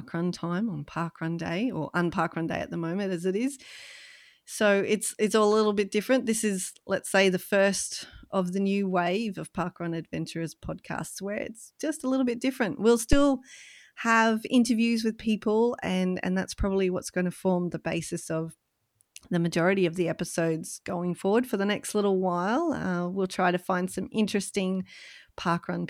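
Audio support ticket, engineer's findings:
Phantom power thump, 13.13 to 13.28 s, speech input. Deep low-frequency thump peaking at about -8 dBFS, dying away within 35 ms. Probable component: input coupling capacitors passing a supply step as phantom was toggled on the live channel. Differs from handling noise or plosive pop: one clean step response with a fast, smooth decay, no rustle, and no link to breath or speech onset.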